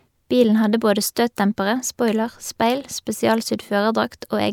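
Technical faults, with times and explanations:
Nothing technical to flag in this bit of speech, so there's no fault worth a line here.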